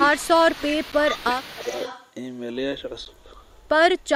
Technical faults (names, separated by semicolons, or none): echo leak; speech suppressed in double talk; block of digital silence